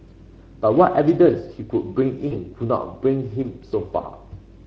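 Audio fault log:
Throughout: Speex codec. The speech sounds noisy and hoarse. This CELP codec has too few bits to model the excitation faithfully, which fits a setting around 16.8 kbps, so the voice's fine structure is replaced by coarse approximations.
2.27–2.37 s and 4.01–4.06 s: VoIP packet loss concealed by the speech codec. Each gap briefly stretches the speech into a buzzy tone or coloured noise that fades, and the voice stays weak or distorted for a while after. The decoder extends its last pitch and filter at decreasing gain, bridging about 40 ms and then 20 ms of missing audio, which fits two lost frames and then one.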